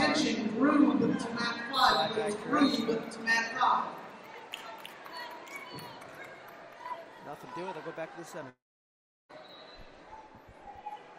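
At 8.49 s there's a long network dropout, likely packets stopped arriving. The receiver stretches the last bit of sound into a brief fading buzz, then about 0.72 s of silence, and the audio picks back up at 9.31 s with roughly 0.8 s simply gone.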